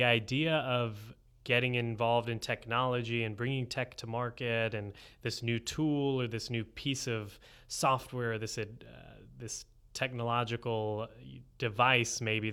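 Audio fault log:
None: no faults are heard anywhere in this speech clip. Nothing in it calls for an entry.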